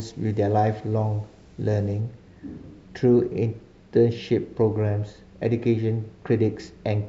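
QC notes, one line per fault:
0.0–2.0 s, pre-emphasis left on: treble sits about 11 dB hot at 10 kHz with no de-emphasis, which fits a 50 µs FM curve, so speech sounds thin, bright and sibilant.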